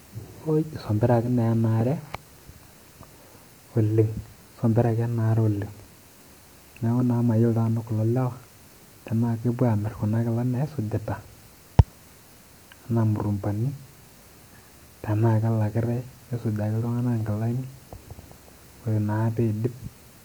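No technical faults are audible anywhere in the speech.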